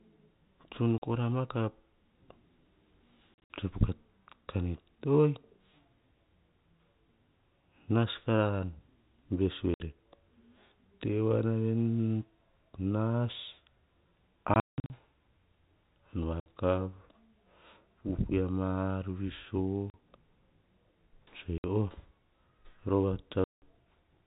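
Packet loss filled with silence occurs at 0.98 s (40 ms, just before "kora ma ka"), 3.35–3.5 s, 9.74 s, 14.54–14.9 s, 16.4 s, 19.9 s, 21.58 s and 23.44–23.62 s. Lost packets were replaced by silence, so the audio drops out with hard edges. Every gap is a multiple of 20 ms, which fits 20 ms packets.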